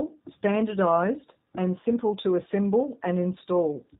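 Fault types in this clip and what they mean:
G.729 codec: a low-rate telephone codec that rebuilds each 10 ms frame from a vocal tract filter, a pitch predictor and a handful of pulses rather than coding the waveform itself. Here the damage is plainly audible: the speech sounds rough and synthetic, a coarseness that fits the 8 kbit/s G.729A variant. On a spectrogram all energy stops at a flat ceiling near 4 kHz, with smeared harmonics below. The waveform keeps its overall envelope but loses fine detail.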